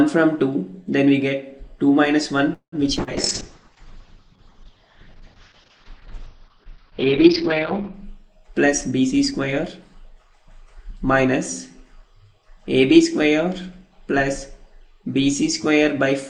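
At 2.53 s the sound stalls for about 0.22 s. The last bit of audio is stretched into a fading buzz, and the final 90 ms or so go silent before things pick up exactly where they left off. That's a call audio freeze, most likely packets held up in transit so the jitter buffer ran dry.

Right after that there are two skip-aheads, at 2.96 to 3.00 s and 3.03 to 3.10 s. Playback jumps forward, losing roughly a tenth of a second or less each time, with the two sides butted together almost seamlessly.

Overlapping those, from 2.98 s to 8.0 s, there's a call bitrate drop. The encoder falls from 128 kbps to 6 kbps and stays at the bottom for about 4.9 s. Bandwidth shrinks from 20 kHz to 6 kHz, so the sound goes muffled and rough and loses its top end.

From 3.41 s to 5.14 s there's a jitter buffer slow-down. Playback runs at 93% speed with the pitch unchanged, as the receiver repeats tiny slices to add 131 ms of cushion. 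It sounds drawn out.

Finally, from 8.67 s to 11.20 s, there's a jitter buffer speed-up. The receiver trims short pitch-period chunks, roughly 0.2 s in all, so everything runs at 107% and sounds a touch hurried while the pitch stays put.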